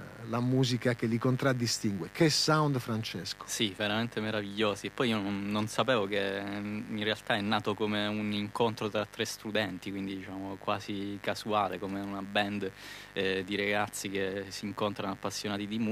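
A speech recording carries mains buzz from start to finish, riding roughly 20 dB below the speech. It is built on 50 Hz mains: sharp switching spikes arriving twice per cycle stack up a dense ladder of harmonics reaching into the kilohertz range, likely from a dimmer, a rectifier or an unshielded cable. That upper energy gives it a raspy, edgy texture that sets it apart from plain hum, which stays a smooth, low tone near 50 Hz.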